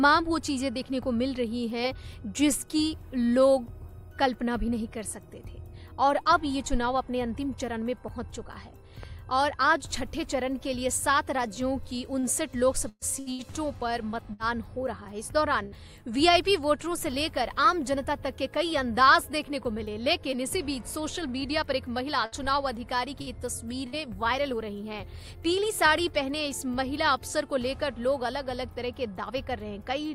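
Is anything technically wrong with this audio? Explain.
Yes. The audio has five kinds of fault.

At 9.03 s there is a loud pop: a single sharp pop lasting about 20 ms and peaking a few decibels above the surrounding audio. It is most likely a sudden voltage step or spike, from a connector, switch, static discharge or driver glitch, entering the signal chain. The circuitry after that point shapes it into a brief thump that sits on top of the sound, which continues underneath without interruption.

From 12.19 to 14.42 s there is repeated packet loss, producing a robotic sound. Audio data went missing over and over in this stretch, leaving six holes, the longest about 124 ms, with roughly 240 ms of real audio gone in total. The receiver filled each hole by extending the last fragment it had. Because one patch follows another so closely, the result is a choppy, robotic texture with pieces of the sound missing.

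At 15.65 to 15.75 s there is a burst of packet loss: about 60 ms of audio lost in one run. The receiver kept the last sound going and faded it down across the gap, so the audio briefly turns into a held buzz or fading hiss. It then resumes further along, and the material in between never comes back.

There are two jitter buffer speed-ups, from 16.87 to 18.34 s and from 24.53 to 26.34 s. In both, the receiver had built up more buffered audio than it targets and trimmed it by cutting out tiny pitch-period slices again and again. That removed about 70 ms in the first stretch and about 40 ms in the second. Playback runs roughly 5% and 2% fast at unchanged pitch, so the first stretch feels slightly hurried.

From 21.41 to 23.96 s there are scattered short gaps. About four isolated losses occurred, the longest around 70 ms, totalling about 120 ms of missing audio. Each one was patched by continuing the preceding sound. 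The audio stays mostly clear, but it carries brief ticks, smears and small hiccups where the patches sit.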